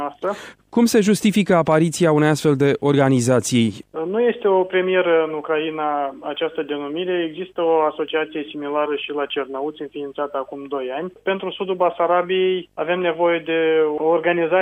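From start to finish there's video or display buzz, a 50 Hz field-rate buzz plus a thin 15.6 kHz line whine, sitting roughly 35 dB under the audio, picked up from a screen or video cable.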